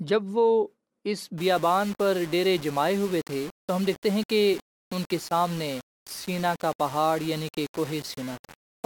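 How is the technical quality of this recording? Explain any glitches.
The technical quality is poor from 1.38 s to the end of the speech. The audio was likely requantized to very few levels by rounding, without dither, which fits about 5 bits. The error follows the signal at roughly 20 dB below it, so from 1.38 s the speech carries a grainy, gritty distortion that shifts with the sound, and quiet stretches sputter or drop out.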